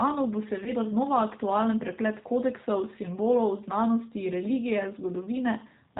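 Throughout, the G.729 codec is plainly audible. The band stops at 4 kHz, and the speech sounds rough and synthetic, which fits an 8 kbit/s stream.

At 0.64 s, and again at 2.20 s, VoIP packet loss concealed by the speech codec appears. The first gap fits about 20 ms lost, the second about 10 ms. The decoder extrapolates briefly, and the sound is stretched and fades.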